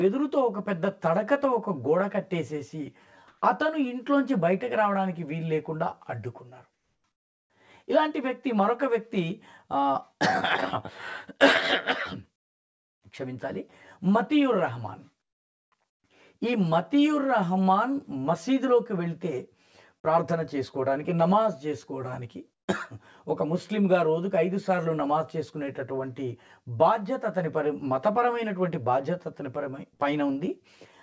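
A constant hollow, phasey colouring runs through the whole recording: channel delay (comb filtering), where one channel lags the other by around 10 ms and the two are summed, cancelling at evenly spaced frequencies starting near 50 Hz. Unlike a roomy or reverberant sound, the notches never move and nothing decays after the sound stops. The call-style band limit, with nothing above 8 kHz, fits a G.722 path. Between 3.28 and 3.42 s, and again between 6.74 and 7.04 s, the quiet background suddenly turns into a smooth, featureless hiss with no texture. It is about 8 dB louder in the first stretch and about 7 dB quieter in the second. This is likely comfort noise in place of the background: the sending side stopped transmitting during a pause and the receiver substituted synthetic noise shaped roughly like the real ambience. Packet loss would instead leave a held or fading fragment of the preceding sound. 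Here no sound is cut off, and only the background's character and level change for those few hundred milliseconds. At 29.94 to 30.01 s there is a burst of packet loss. The last sound is stretched and faded for about 55 ms, and roughly 60 ms of audio never arrives, so playback resumes a little further on. A level dropout would instead go silent without the smeared continuation.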